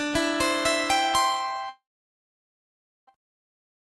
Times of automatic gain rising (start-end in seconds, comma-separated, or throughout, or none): none